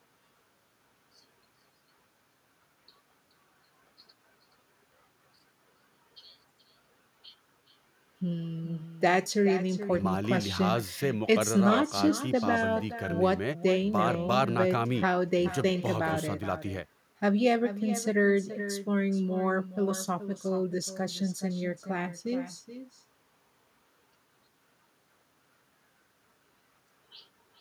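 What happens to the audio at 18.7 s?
At 18.7 s, as throughout the clip, a far-end loudspeaker feeds the microphone with no echo canceller, so the speech returns roughly 400 ms later as a thinner copy about 13 dB quieter.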